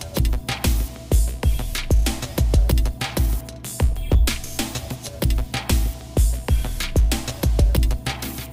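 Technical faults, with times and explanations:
Throughout, mains hum: a steady low tone sits at 60 Hz under the whole clip, roughly 20 dB below the wanted signal, with some low harmonics. Power-line current is leaking into the signal path, most plausibly through a ground loop or a nearby transformer's magnetic field.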